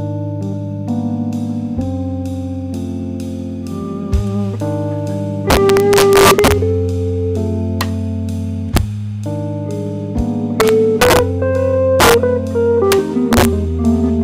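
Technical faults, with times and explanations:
5.50–6.52, 7.81, 8.77, 10.60–11.19, 12.00–12.14, 12.92 and 13.33–13.45 s, integer overflow: loud peaks run past the integer limit by about 1 to 4 dB. Instead of being held there, they wrap to the opposite extreme. Each wrap jumps across the whole range, producing violent cracks far harsher than clipping.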